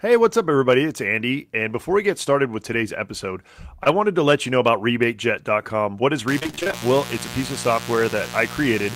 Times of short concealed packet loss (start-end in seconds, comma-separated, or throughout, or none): 3.83-3.87